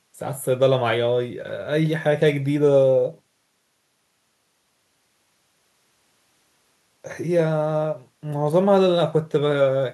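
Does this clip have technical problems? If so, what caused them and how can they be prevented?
No, nothing in this speech clip stands out as a technical problem, so there's no cause to track down or anything to prevent here.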